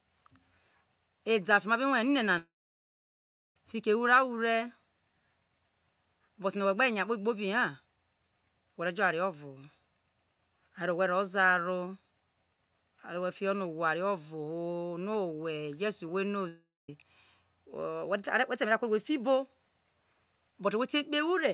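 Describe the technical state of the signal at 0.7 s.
At 0.7 s the speech is intact, carried cleanly through the WebRTC call path with its G.711 A-law coding and nothing above 4 kHz, as that path normally sounds.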